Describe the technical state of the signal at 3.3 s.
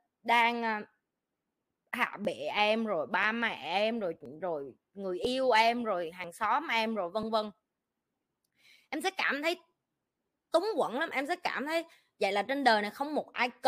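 At about 3.24 s, two stream segments overlap in their timestamps, which fits segments of roughly one second, and the player trims the overlap from audio that was never duplicated. About 14 ms of the speech disappears, so the waveform jumps and a brief click or skip is heard.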